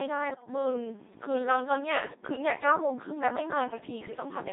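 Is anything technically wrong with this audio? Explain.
Yes. The whole clip has passed through a Codec 2 vocoder. The speech is rebuilt from pitch, voicing, energy and envelope parameters using sine waves, so the result is robotic and buzzy and confined to about 200 Hz to 3.7 kHz, with heavy damage that points to a rate near 2.4 kbit/s. The artificial tone is present throughout, which separates it from the bursty artefacts of a lossy waveform codec.

Bit errors on digital voice radio appear from 0.32 to 0.48 s and from 2.01 to 2.22 s. Corrupted bits, at an error rate of a few percent, scramble several vocoder frames, so pitch, level and timbre jump and the speech breaks into warbling gibberish. It does not drop out into silence as packet loss would.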